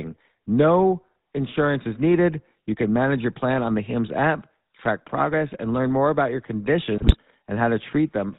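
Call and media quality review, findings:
Buzzy, gravelly speech, nothing above 4 kHz, throughout. GSM full-rate codec: pulse-excited vocal-tract model discards most excitation detail; roughness fits 13 kbps coding.

Squawk and gargling burst, 6.98–7.15 s. GSM bit errors: corrupted filter, pitch and gain values distort spectrum and level, consistent with about eight damaged frames.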